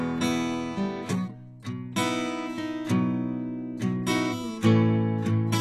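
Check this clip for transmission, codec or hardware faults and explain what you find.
One fault runs through the whole music clip. HE-AAC compression, throughout: the treble is rebuilt from copied lower bands and stops at 12.3 kHz, so high detail sounds heavily gritty and metallic, likely from a very low bitrate near 16 kbps.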